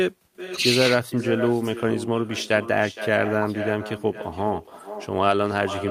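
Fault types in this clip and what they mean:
echo with no canceller: the far end is playing the call over a loudspeaker, and its microphone picks that playback up and sends it back with nothing in the path to subtract it. Across the whole speech clip, every phrase returns roughly half a second later as a second copy about 11 dB below the original. That copy sounds thinner, because it has passed through a loudspeaker and the room it plays into.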